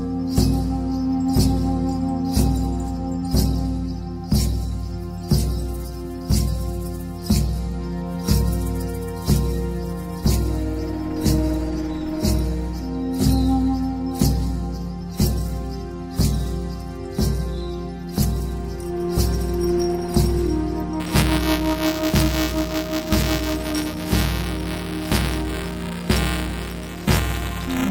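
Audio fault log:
21.00–27.91 s, buffer tearing: a steady 375 Hz robotic buzz under the signal, consistent with a 128-sample buffer; a small slice of each period repeats audio about 10 ms old, with hard joins.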